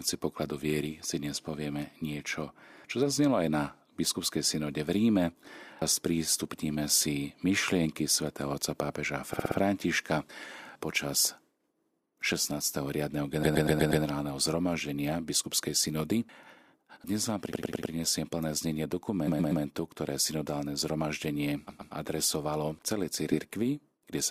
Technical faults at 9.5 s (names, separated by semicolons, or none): repeated frames